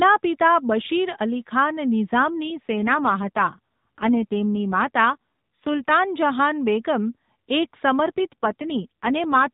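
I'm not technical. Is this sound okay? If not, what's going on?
No. From 2.18 to 5.90 s and again from 8.06 to 9.50 s, there is an AMR rate drop. The mobile link weakens, so the phone codec spends fewer bits on the voice. It turns rougher and buzzier, but unlike a dropout it never goes silent or muffled.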